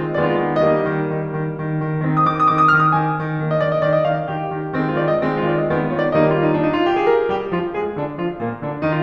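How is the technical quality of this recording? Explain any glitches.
No technical glitches can be heard anywhere in the music. There is nothing that needs explaining.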